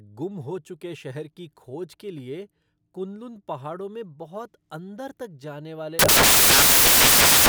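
From 5.99 s, just after "जाने वाले", until 7.49 s, the speech becomes loud, harsh broadband noise: samples built from the wrong bytes, so the fast-changing low bits dominate each value.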